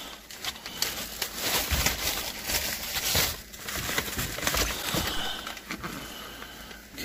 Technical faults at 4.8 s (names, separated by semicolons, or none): broken MP3 bit reservoir